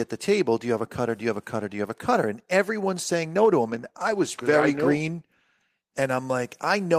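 At 3.62 s, just after "everyone's saying no to", a call bitrate drop makes the speech rough and coarsely coded until about 6.25 s. The encoder was given far fewer bits, which fits a fall from roughly 32 to 15 kbps.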